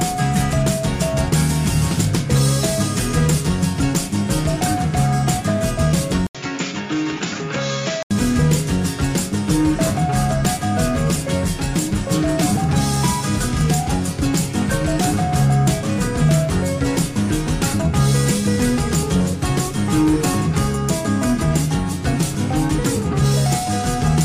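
At 6.27 s an 80 ms gap precedes duller, boxier sound, a few decibels quieter, cut off above 7.2 kHz and carrying a faint new noise floor. The input likely switched to a poorer device, and full bandwidth returns at 8.11 s.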